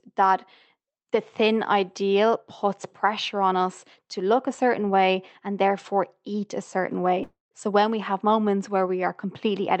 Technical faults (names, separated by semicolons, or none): long network dropout